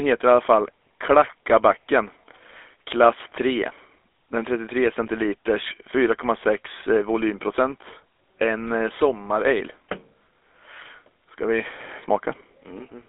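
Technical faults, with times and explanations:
Throughout, GSM full-rate codec: the speech has passed through a vocal-tract model driven by coarse, regularly spaced pulse excitation. That gives a plainly audible buzzy, gravelly roughness. A phone-line band of 300 Hz to 3.5 kHz, with nothing above 3.7 kHz, leaves the voice narrow and dull.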